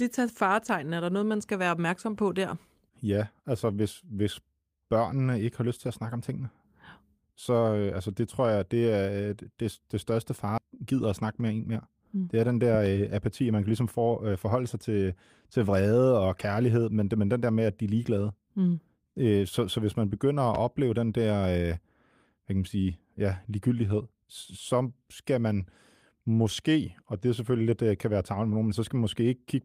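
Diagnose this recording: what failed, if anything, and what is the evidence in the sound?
Skip ahead, at the network and jitter buffer stage: right after "øh det det største", playback jumps at 10.57–10.59 s with no gap filled in. Roughly a second of speech is missing. That stretch was dropped while later audio was already queued, and the two sides were spliced together almost directly.

Jitter buffer speed-up: from 10.66 to 12.14 s the speech runs at about 108% speed with unchanged pitch and sounds hurried. Holding more audio than it aims for, the receiver trimmed short pitch-period slices, around 150 ms in total, to bring its delay back down.

Loud pop, likely from the analogue wiring or a driver-level voltage transient: a pair of sharp pops at 12.74–12.89 s follows "er den", and a single pop at 20.55–20.57 s follows "hvis man begynder at". Each peaks about 10 dB above the speech, which continues underneath.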